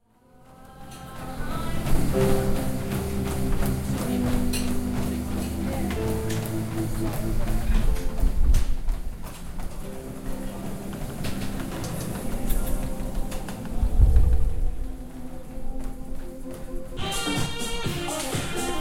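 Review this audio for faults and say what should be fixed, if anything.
10.25 to 15.45 s: doubled audio track, with a copy about 150 ms late and 5 dB quieter, likely from a second capture path. The spectrogram shows every event twice, abruptly starting and stopping. Route each source through only one capture path and check edits for overlapping duplicate regions.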